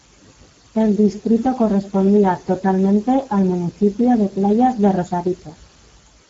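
From the first moment to the end, the speech carries plainly audible Speex codec damage. Speex is a CELP coder that models the vocal tract and spends its remaining bits on the excitation signal. At this setting those bits are scarce, and the sound points to a rate of around 10 kbps. Voiced sounds come out hoarse and grainy. The band above 4 kHz is a shaped noise fill rather than real detail, and nothing is present above 7.7 kHz.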